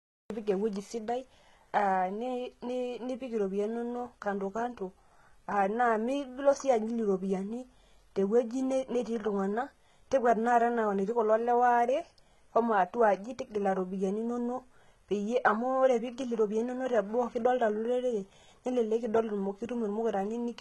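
The opening 0.30 s is digital silence, and at 0.30 s the speech bursts in partway through a sound with no natural attack or fade. This is a cut-off start: the recording or stream began late, so capture landed mid-sound rather than before it.

Throughout, the treble sounds synthetic, with s sounds gritty, metallic and lispy, heavy codec damage, and nothing above 11.7 kHz. This likely comes from HE-AAC compression, fitting HE-AAC v2 near 16 kbps, where upper bands are copied up from lower ones and their harmonics misalign.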